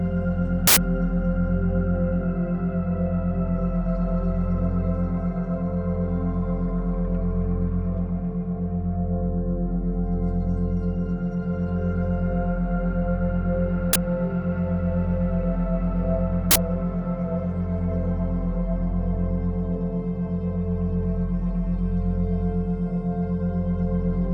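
Three uninitialised buffer bursts interrupt the sound, at 0.67–0.77 s, 13.93–13.96 s and 16.51–16.56 s. Each time, a block was played before audio had been written into it, so stale memory came out as harsh digital noise. The lengths of 93, 23 and 46 ms fit buffers of 4096, 1024 and 2048 samples. On a waveform each shows as a sudden loud slab. On a spectrogram it appears as a bright broadband block with hard vertical edges.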